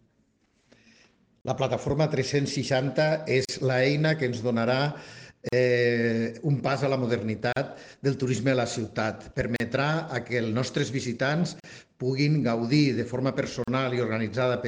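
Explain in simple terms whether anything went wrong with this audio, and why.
A gap at a join of encoded pieces repeats every 2 seconds, at 1.41, 3.45, 5.49, 7.53, 9.56, 11.6 and 13.64 s. Separately encoded pieces were joined untrimmed, leaving silences of about 40 ms before the sound resumes.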